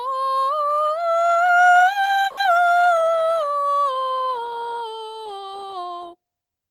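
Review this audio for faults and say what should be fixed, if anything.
At 2.27 to 2.39 s the music stalls and is replaced by about 100 ms of fading buzz, then resumes where it stopped, with nothing lost but everything after now running 100 ms late. This call audio freeze is likely packets delayed in transit draining the jitter buffer. Preventing it means a larger or adaptive jitter buffer on the receiver and a more stable network path.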